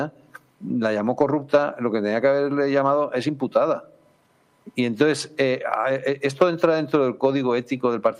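No audible defects are present anywhere in the recording.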